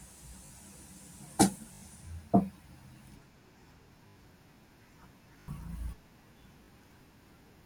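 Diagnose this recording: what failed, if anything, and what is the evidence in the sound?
Repeated buffer, at the driver or buffer stage. The speech stutters at 0.46, 1.74, 4.08, 5.4 and 6.64 s. Each time, a piece of about 20 ms replays two or four extra times because fresh audio arrived late. The waveform shows identical tiled blocks with hard joins, and the spectrogram shows thin vertical lines.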